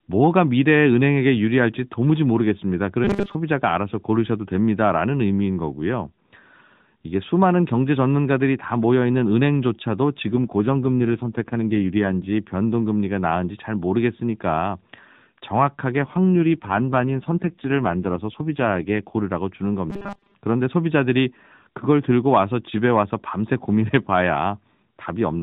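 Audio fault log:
3.04–3.35 s, robotic sound from repeated short buffers: audio likely arrived late, so most of it was replaced by repeats of a roughly 5 ms slice, forcing a rigid 200 Hz metallic buzz.
10.33–12.30 s, AMR rate drop: the mobile link pushed the AMR-NB codec from 12.2 to 5.9 kbps, so the voice turns rougher and more synthetic, with no gap and the same 4 kHz band.
16.04–19.25 s, AMR rate drop: the codec again fell from 12.2 to 5.9 kbps, so the voice turns coarse and buzzy until the higher rate returns.
19.90–20.34 s, robotic sound from repeated short buffers: about a 5 ms stretch repeats in place of most of the likely missing audio, imposing a 200 Hz buzz that only loosely follows the speech.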